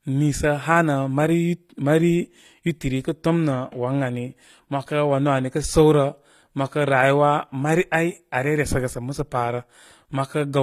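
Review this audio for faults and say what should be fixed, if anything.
Throughout the speech, s sounds are plainly gritty and metallic, with nothing above 15.5 kHz. This is likely HE-AAC compression, which fits a bitrate near 24 kbps, pasting copied lower bands into the treble. A spectrogram shows blocky, repeated upper bands under a flat ceiling. Encoding at a higher bitrate would prevent it.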